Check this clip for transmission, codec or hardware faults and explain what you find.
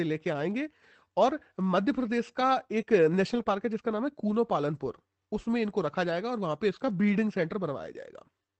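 Two kinds of packet-loss fault occur in this speech, both around 3.3 to 3.5 s, with one more at 5.69 s. The sound passed through an Opus call path, and its audio band stops near 8 kHz.

Lost packet rebuilt from error correction, 3.31 to 3.41 s and 5.69 to 5.71 s: packets went missing, and the decoder rebuilt them from low-bitrate copies carried in the following packets. In the first stretch 60 ms is rebuilt, which fits three 20 ms packets. The second spans 20 ms. Nothing drops out, but those moments turn rougher and grainier.

Short concealed packet loss, 3.43 to 3.47 s: about 20 ms arrived too late to use. The receiver covered roughly 16 ms by extending the preceding sound, then blended back into the real signal, leaving a brief smear or wobble just after the rebuilt stretch.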